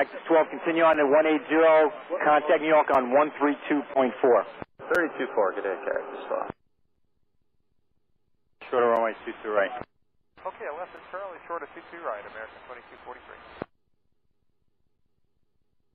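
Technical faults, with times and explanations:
0.93, 2.94, 4.95, 6.95, 8.96, 10.97, 12.97 and 14.98 s: gap between chunks. The sound cuts out in a short, hard-edged hole of 6.5 ms, repeating every 2.0 s. The audio arrived in 2-second chunks with silence left at each join, so the sound is interrupted rather than lost.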